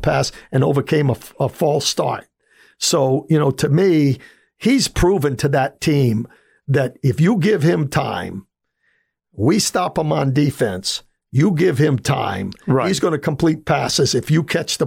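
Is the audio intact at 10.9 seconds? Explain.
Yes, at 10.9 seconds the speech plays through intact, with no audible fault at that moment.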